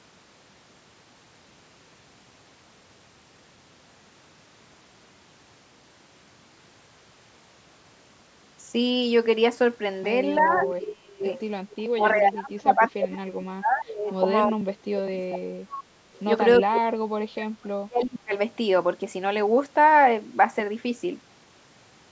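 From 10.37 to 10.73 s a faint delayed copy of the speech trails the talker by 333 ms, about 10 dB down, and returns as fainter scraps at 11.33–11.39, 11.71–11.75 and 16.14–16.19 s, sinking to roughly 30 to 35 dB below. This is an echo leak, likely from a loudspeaker whose echo canceller let part of its microphone pickup back into the call.

Overlapping this, the talker's speech dips and breaks up in pieces at 10.38–11.24, 11.76–14.09, 14.48–15.87 and 16.61–18.33 s, dropping by roughly 30 to 35 dB at worst. This is speech suppressed in double talk: with both sides talking, the canceller likely turned everything down.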